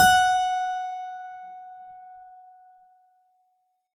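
Throughout the music, the sound is swirly, smeared and hollow, with blurred attacks and nothing above 17.7 kHz. This is generation loss, likely from repeated lossy coding, around ten passes, which fits an AAC-LC chain at 96 kbit/s. Each decode and re-encode falls on a shifted frame grid and quantises again, so noise and spectral gaps from every pass stack up well beyond what that bitrate would produce in a single encode.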